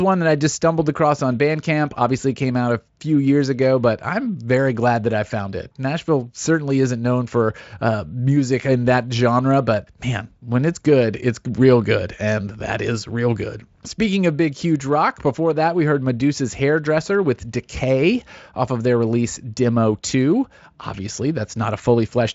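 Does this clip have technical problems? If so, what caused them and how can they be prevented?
No, the speech signal is intact and steady, with content extending up to about 7.7 kHz and nothing above, which fits a wideband voice codec running at a generous setting.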